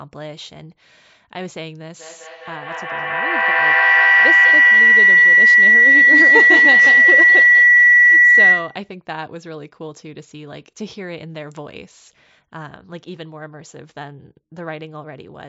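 Speech carrying a feedback howl from 1.99 to 8.95 s: two devices in the same room share the call, so each trip from loudspeaker back into microphone adds level. The repeats narrow to a tone near 2 kHz that peaks about 15 dB above the speech and pulses roughly every 200 ms. On a spectrogram this shows as a bright horizontal line at 2 kHz, beating at regular intervals. On the waveform the envelope swells well above the speech level across that span. The energy stops at 8 kHz because of the call's microphone processing.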